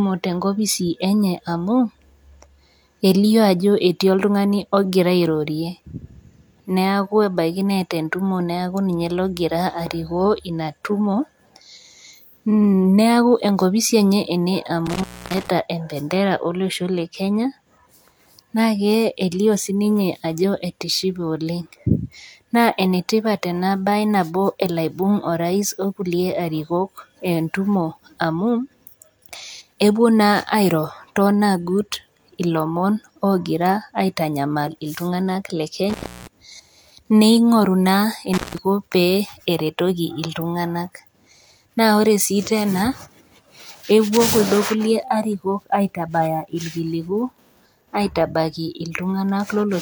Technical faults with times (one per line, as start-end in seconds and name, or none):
14.86-15.48 intermittent contact
35.89-36.27 intermittent contact
38.33-38.58 intermittent contact